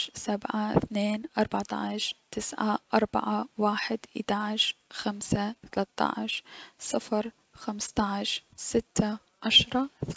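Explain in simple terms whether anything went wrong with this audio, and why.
Nothing went wrong here; no faults can be heard anywhere in the recording.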